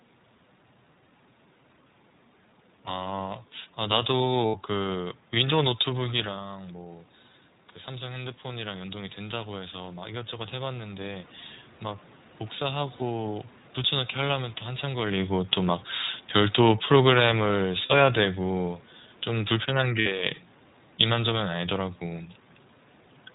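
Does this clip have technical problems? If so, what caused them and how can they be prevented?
Yes. Throughout, the iLBC codec sets a hard ceiling at 4 kHz on a spectrogram and gives the speech a rough, synthetic edge, consistent with its 15.2 kbps mode. Prevent this by negotiating a wideband codec such as Opus.

Lost iLBC frames occur at 4.47–4.58 s (80 ms), 12.96–13.02 s (40 ms), 17.86–17.92 s (40 ms) and 20.00–20.07 s (60 ms). Each gap matches whole 20 ms frames. The decoder repeats the last pitch cycle with added noise, which sounds like a brief buzzy held vowel. On a spectrogram these gaps show as smeared, evenly repeating harmonics, and on the waveform as a run of near-identical periods. Prevent this with forward error correction or a better-provisioned network path.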